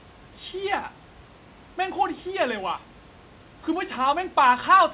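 No technical faults can be heard in this speech recording.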